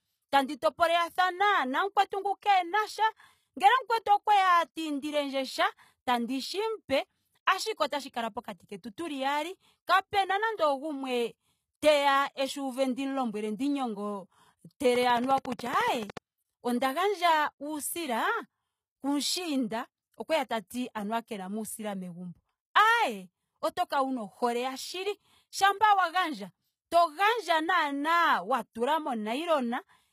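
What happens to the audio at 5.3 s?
At 5.3 s the speech carries plainly audible codec damage: the treble sounds rebuilt rather than real, and s sounds take on a gritty, metallic or lispy edge, with nothing above 14.9 kHz. This runs through the whole clip, not just this moment. The likely cause is HE-AAC compression at a low bitrate, fitting roughly 20 kbps. Only the lower spectrum is coded, and the upper bands are copied up from below under a coarse envelope, so harmonics fail to line up across the crossover.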